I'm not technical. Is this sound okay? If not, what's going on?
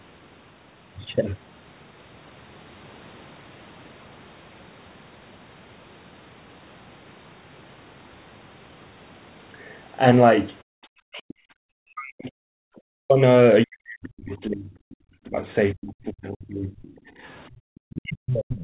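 No, there are a few problems, all caused by the call's echo canceller, the part that tries to stop the other person's voice from bouncing back through your microphone.

First, background gated by the echo canceller. From 10.63 to 10.79 s the room sound behind the talker suddenly drops out almost to silence for a split second, then comes back. A smaller dip happens from 17.12 to 17.20 s, where the background just sags a bit. In both cases the canceller heard the loudspeaker playing and clamped the microphone down until it decided the coast was clear.

Second, what sounds like the other side's voice leaking through. Faint scraps of a second voice pop up at 10.81 to 10.89 s, 14.91 to 14.96 s, 16.83 to 16.87 s, and from 18.53 s to the very end. The first and last are easier to catch, while the middle two are very quiet and brief. This is likely the far end playing on the talker's speaker and slipping past the canceller instead of being removed.

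Third, speech suppressed in double talk. Between 11.07 and 16.84 s the talker's voice keeps ducking, sometimes nearly vanishing, for around four seconds in total, and it happens again from 17.75 s to the end. The likely cause is both people talking at once: the canceller couldn't tell its own talker from the echo, so it turned everything down together. The slightly muffled, phone-like sound throughout comes from the normal call line, not from these faults.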